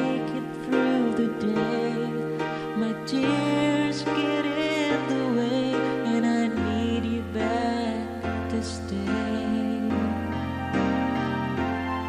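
Nothing is technically wrong with this audio.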